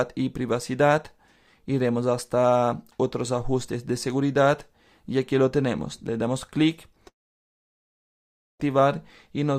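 A long network dropout likely halted incoming audio from 7.07 to 8.60 s; a fading buzz gives way to silence, and 1.5 s never returns.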